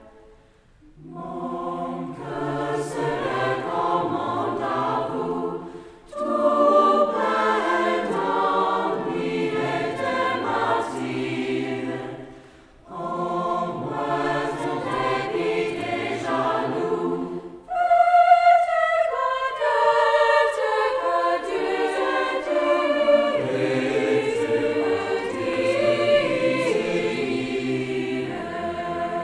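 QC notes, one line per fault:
No faults heard anywhere in the audio.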